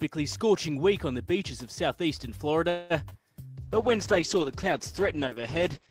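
A call audio freeze runs from 2.69 to 2.92 s. For about 0.21 s the last sound is stretched into a fading fill with no true silence. The audio then picks up where it stopped, adding roughly 0.21 s of delay without losing content, which points to packets held up in transit until the jitter buffer likely ran dry. Short concealed packet loss follows at 3.10 and 3.13 s. In each case about 20 ms never reached the decoder in time, so the receiver extended the preceding sound and blended back, producing a brief smear or wobble where the gap was patched. A call bitrate drop starts at 3.64 s and lasts to the end. The encoder falls from 32 to 10 kbps and its bandwidth narrows from 20 kHz to 8 kHz, so for the final 2.25 s the sound turns coarser, rougher and muffled, with the top end gone.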